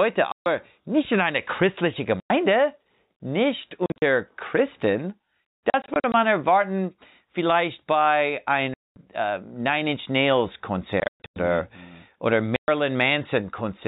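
Hard-edged holes of silence cut into the speech at 0.32 to 0.46 s (just before "nicht in einer christlichen"), 2.2 to 2.3 s (right after it), 3.86 to 4.02 s, 5.7 to 6.14 s, 8.74 to 8.96 s (after "erwarten vielleicht bei"), 11.0 to 11.36 s and 12.56 to 12.68 s. This is packet loss filled with silence. At 3.86, 5.7 and 11.0 s the gaps are broken into several short bursts rather than one solid block. Every gap is a multiple of 20 ms, which fits 20 ms packets over the G.711 telephone coding, whose narrow band can be heard throughout.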